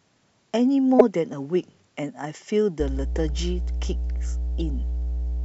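At 0.99 to 1.01 s a corrupt frame decoded produces a sharp, squeaky burst. Its length, roughly that of one codec frame, suggests a damaged packet that the decoder still played. It misread the coded values and put energy at the wrong frequencies. It has a brief tonal, chirp-like colour, unlike the flat tick of a simple click or the gap a dropped frame would leave.

From 2.8 s to the end, mains hum at 60 Hz sits under the speech at roughly the same level as the speech itself. The most likely cause is a ground loop or a nearby transformer feeding the power line into the signal. It is a steady, pitched drone fixed at 60 Hz. That tells it apart from broadband low-frequency rumble, and it lacks the harsh upper harmonics of a buzz.

While the hum runs, two more corrupt frames decoded appear at 3.16 s and 4.61 s as faint blips far quieter than the first. The later one points to two adjacent damaged frames.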